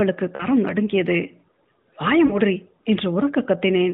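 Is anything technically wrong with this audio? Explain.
Yes. There are lost AMR speech frames at 0.36 to 0.46 s and 2.26 to 2.39 s, each gap consistent with two missing 20 ms frames. With no valid data, the decoder repeats the last pitch and vocal tract settings at falling gain, so the sound smears into a brief warbling hold and dips before recovering roughly. On a spectrogram the harmonics stretch flat and fade, all below the narrowband codec's 4 kHz ceiling. The waveform shows a shrinking, repetitive envelope.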